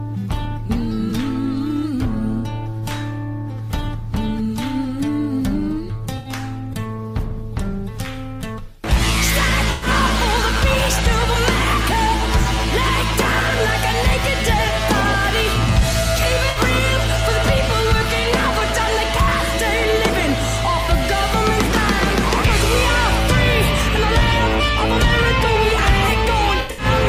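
Brief smeared, hollow patches interrupt the sound at 1.09 to 1.12 s, 6.17 to 6.29 s, 9.71 to 9.87 s and 16.49 to 16.58 s, and a broken cluster spreads from 26.61 to 26.85 s, its longest run about a tenth of a second. This is AAC frame loss with concealment. Gaps of 21 ms to 107 ms, fitting one to five lost frames, were patched by the decoder from the last good spectrum, leaving noisy, phasey fill in place of the real signal.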